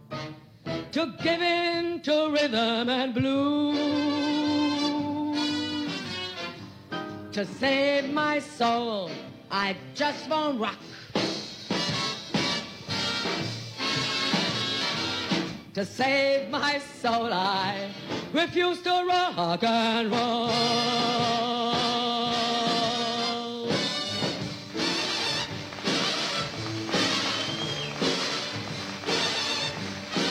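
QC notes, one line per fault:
12.26 s and 14.77 s, compressed frames skipped: the audio lurches ahead by roughly a tenth of a second each time, which fits a couple of 46.4 ms frames going missing or being refused by the decoder.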